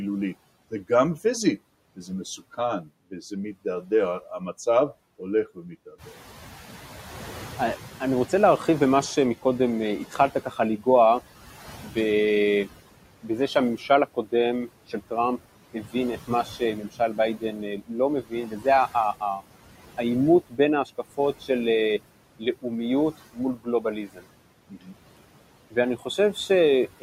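Throughout the speech, the background sinks between phrases and swells under them: noise suppressor artifacts, from band-by-band gating that takes about 17 dB off the noise. From 0.71 to 6.08 s, soft consonants and word endings sound swallowed, dropping by up to about 11 dB over a little under half a second in total. This is speech cut by the noise suppressor, which mistook those quiet parts for noise.

When the room noise jumps by about 11 dB near 6 s, the noise comes through louder and then fades gradually from 5.98 to 10.74 s. This is the noise suppressor catching up, its noise estimate taking 4.76 s to adapt before settling at about 13 dB of cut.

Between 9.42 and 10.87 s, short stretches of speech dip again by up to about 13 dB, roughly a fifth of a second in all. The same speech cut by the noise suppressor returns from 11.81 s to the end, this time deeper, at up to about 18 dB and around 3 s in total.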